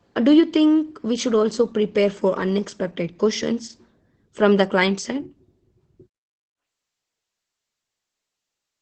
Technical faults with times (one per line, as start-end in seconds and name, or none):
0.00-8.82 Opus voice compression